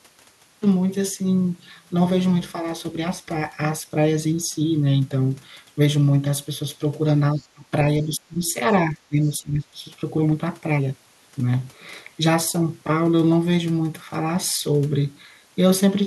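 At 7.33 s the speech dips sharply until 7.65 s, falling by about 25 dB at its lowest. This is speech suppressed in double talk. Both ends were likely talking at once. The echo canceller could not tell the local talker from the loudspeaker echo, so it pulled everything down. Inside that dip, from 7.39 to 7.47 s, the other side's voice leaks through faintly. It sits about 35 dB below the speech, a scrap that the canceller likely failed to remove. The same suppression returns from 8.04 to 8.56 s and again from 8.9 to 9.82 s. Each time the speech drops by about 20 dB. In the last stretch, from 9.23 to 9.29 s, another brief fragment of the far voice slips through at about 35 dB down.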